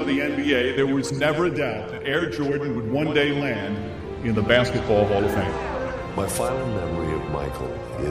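No technical fault can be heard anywhere in this audio. There is nothing to point to at any moment and no cause to name.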